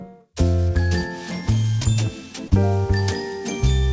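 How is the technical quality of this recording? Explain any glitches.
The recording carries one audible glitch, heard through a call path whose sound stops at 8 kHz, consistent with a G.722 codec at 64 kbps.

From 2.48 to 2.53 s there is a brief smear, a short wobble where the sound seems to hang and then rejoin itself. This is short concealed packet loss: about 40 ms of audio arrived too late for the decoder, so the receiver improvised roughly 32 ms by extending the preceding sound, then crossfaded back into the real signal.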